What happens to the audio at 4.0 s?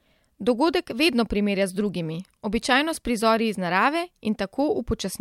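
Nothing goes wrong at 4.0 s; the speech carries on intact through that moment with no dropout, click, or distortion.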